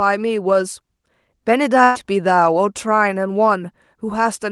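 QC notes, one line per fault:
1.83–1.97 s, burst of packet loss: about 120 ms of audio never arrived. The receiver held the last sound, faded it, then jumped ahead.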